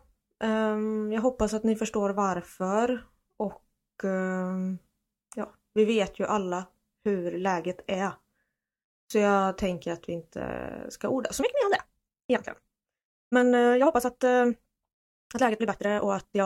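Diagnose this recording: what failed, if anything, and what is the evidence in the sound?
From 11.38 s through the end at 16.46 s, the speech abruptly runs 1.66 times faster while its pitch stays put, so it sounds rushed. That's a time-stretched section, likely software squeezing the audio before storage by dropping short slices to fit a set length.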